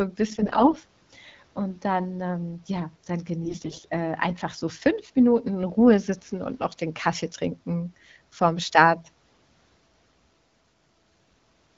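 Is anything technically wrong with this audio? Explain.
Yes, there are AMR bit errors. Two bursts occur at 0.30 to 0.74 s and at 3.44 to 3.87 s, between "dann ähm ja dann" and "äh einfach so". Flipped low-priority bits misplace the excitation pulses and skew the fine pitch, gain and spectral values. The speech turns hoarse and gargly but keeps its pitch and level, which rules out dropouts. The second burst is harsher.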